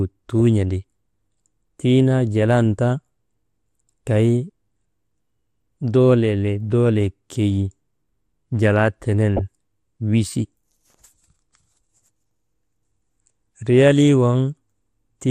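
All the way through, the speech has that dull, gurgly quality you get when the top end has been starved of bits. Upper frequencies drop in and out, and what's left sounds grainy and coarse. That's likely MP2 compression at a low rate, with the sound encoded at around 80 kbps, where Layer II can't afford to keep all its sub-bands running and just shuts the high ones off.

Then from 9.37 to 9.41 s there's a short burst of DAB burbling laid over the speech. It's what happens when a small share of bit errors, a fraction of a percent here, slips past the error correction into the MP2 data. Corrupted samples put short blips of noise into single sub-bands, and any corrupted scale factors that get through make sub-bands jump in level. The short span suggests only a few frames got hit.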